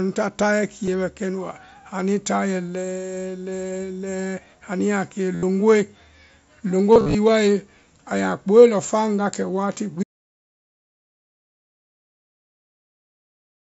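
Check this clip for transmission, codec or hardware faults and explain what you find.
Two faults appear in this speech clip over a Bluetooth mSBC link: concealed packet loss and a final dropout to silence.

Concealed Bluetooth headset packet loss: headset packets went missing, and the phone filled each gap by repeating the best-matching recent waveform. At 0.86 s, just before "bɛ kɛnu", 15 ms is patched almost invisibly. From 5.35 to 5.43 s, a 75 ms run becomes a held buzzy tone. From 6.92 to 7.15 s, scattered losses totalling about 158 ms (longest 37.5 ms) leave buzz and warble.

Audio dropout to silence: the input was lost, likely through a link failure or disconnection, and silence was written. After "kɛ wati" at 10.03 s, the sound stops dead into total silence, with no room tone, and stays silent until the end.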